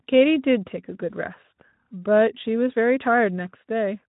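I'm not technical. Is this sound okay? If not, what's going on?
Yes, it sounds fine.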